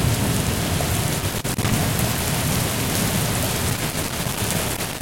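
At 1.19 s a burst of loose connector crackle breaks in and lasts until 1.72 s. It returns at 3.70 s and continues to the end of the clip at about 5 s. A worn or dirty contact is making and breaking as it shifts, chopping the signal on and off and adding pops wherever DC sits on the line. What separates this from digital clicks or buffer dropouts is the irregular, scratchy texture. Those faults give cleaner gaps.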